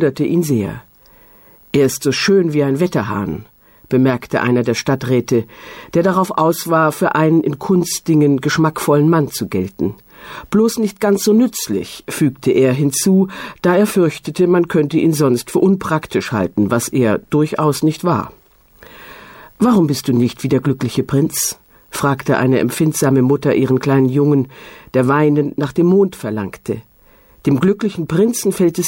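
No technical faults are audible.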